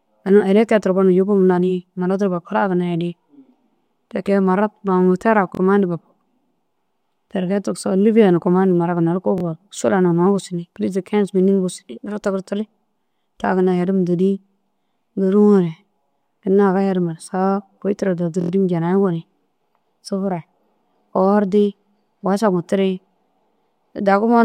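Audio failed to arrive in time, so the device replayed its last buffer, a repeated buffer fault. At 5.55 to 5.60 s and 9.38 to 9.43 s, a 23 ms piece plays twice more. Between "kôi tira daha" and "janayi goni" at 18.41 to 18.51 s, it plays four more times. Each repeat sounds as a stuttering buzz with hard joins, fitting a 1024-sample buffer.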